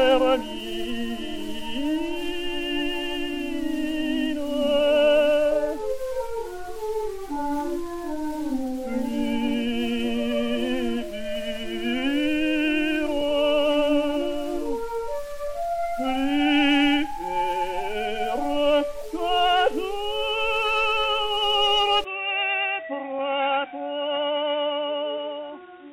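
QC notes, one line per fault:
22.04–25.93 s, input switched to a poorer device: with no gap at the change, the sound abruptly turns dull and boxy, nothing remains above 3.8 kHz, the level drops by roughly 10 dB, and a new background noise sits about 30 dB under the signal. The likely cause is a switch to a narrower-band microphone or headset call profile. Unlike a simple low-pass filter or EQ change, bandwidth, level and noise floor all shift together at one instant.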